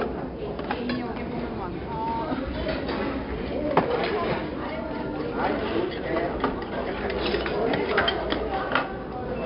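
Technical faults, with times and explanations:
Throughout, 4-bit ADPCM compression: each sample is coded as a small 4-bit step from a predicted value, so the quantisation error rides along as a gritty hiss that rises and falls with the level of the sound. The damage is heavy, with audible roughness on sharp attacks where the adaptive step lags behind. Nothing is present above 5.3 kHz, leaving a dull top end that fits a reduced sample rate and a stream of about 44 kbps.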